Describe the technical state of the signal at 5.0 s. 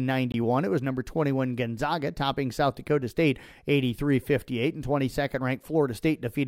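At 5.0 s the speech signal is intact, with no audible fault at that point.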